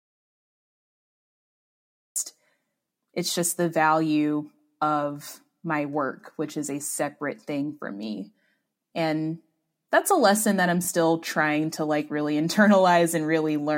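Audio dropout to silence runs from the very start to 2.16 s. The speech is already absent when the clip opens, and the gap is silent with no room tone. This likely means the input was lost while the recorder kept writing silence.

Bluetooth stutter follows at 10.85 to 10.88 s. About 23 ms of audio went missing, which fits a single lost packet, and the receiver replayed its last buffer to cover it. This is heard as a brief repeated slice, a tiny stutter, before the speech picks up again.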